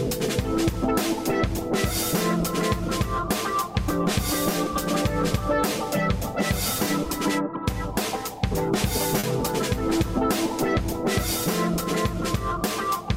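At 9.19 to 9.26 s there is short concealed packet loss: about 40 ms of audio arrived too late, and the decoder extrapolated the preceding sound, leaving a brief smear.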